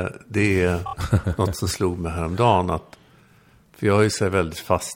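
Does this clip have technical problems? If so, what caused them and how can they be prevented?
Yes. Just after "det är", from 0.85 to 0.93 s, the speech stutters with repeated frames: the same 26.1 ms block plays three extra times, which fits a single compressed frame being resent or rewritten. That adds 78.4 ms to the clip. Deduplicating frames by sequence number or timestamp before decoding prevents this.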